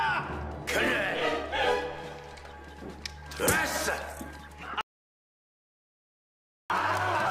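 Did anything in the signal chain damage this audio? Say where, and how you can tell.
Yes. The input path most likely lost its connection at the device or link, while recording carried on writing silence: an audio dropout to silence. From 4.81 s to 6.70 s the sound stops dead into silence, with no room tone, and about 1.9 s of material is missing.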